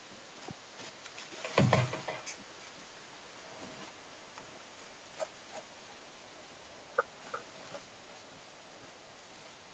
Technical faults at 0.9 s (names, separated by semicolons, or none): echo with no canceller